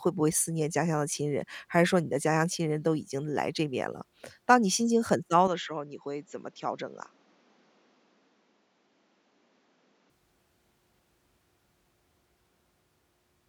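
From 5.47 s to 10.10 s the speech abruptly turns duller and a little boxier, then clears again. This is an input switched to a poorer device, likely a different microphone or a headset's call profile taking over mid-recording. That stretch carries nothing above 7.6 kHz, sits a few dB quieter, and brings a faint new background noise roughly 35 dB down. On a spectrogram the upper band cuts off flat across that span. The waveform shrinks slightly, with no gap at either switch.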